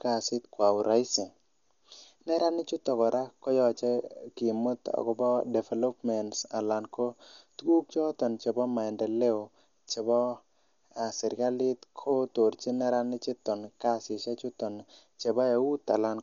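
Speech throughout shows heavy Dolby Digital compression, likely from a low-rate AC-3 encode that fits about 48 kbps: narrowed bandwidth, dull tone, rough fluttering noise around voiced sounds. Unlike plain low-pass filtering, the gaps are filled with dither-like grain.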